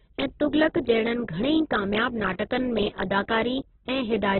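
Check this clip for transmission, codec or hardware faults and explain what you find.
One codec fault runs through the whole speech clip: Opus compression. Nothing survives above 4.1 kHz, so a spectrogram shows a hard, flat ceiling with empty space above it from start to finish. The likely cause is a very low rate, around 8 kbps, where each band gets too few bits and is filled with folded or noise-like content. The sound is narrow, rough and grainy, with smeared harmonics.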